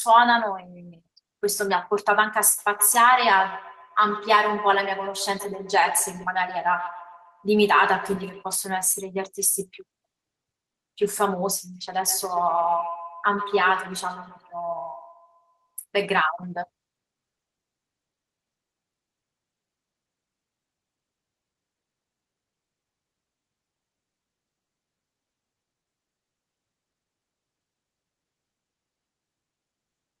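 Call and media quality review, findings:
Feedback echo between two devices, 2.58–8.44 s: speech comes back at a steady interval of around 150 ms, peaking about 12 dB under the direct sound. Probably a second device on the call in the same room. Its mic re-sends the other's playback, and no canceller covers that path.

Same feedback echo, 11.74–15.79 s: similar ~150 ms return, about 13 dB down. Same loop, likely the same device pair.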